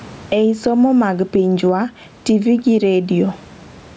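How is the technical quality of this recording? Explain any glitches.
The recording has one fault, gain pumping, which runs through the whole clip.

Gain pumping: Throughout the speech, the gain swings by around 10 dB. The likely cause is a microphone gain set far too high, so a fast limiter or compressor clamps down on each loud syllable and releases in the gaps. The room noise sits about 36 dB below the speech. Loud and quiet passages sit closer together than they should, giving a squashed sound. The call's microphone processing, which leaves nothing above 8 kHz, is working as expected.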